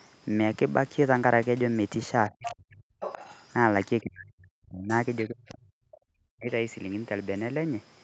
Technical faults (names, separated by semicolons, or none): speech suppressed in double talk; other side's voice leaking through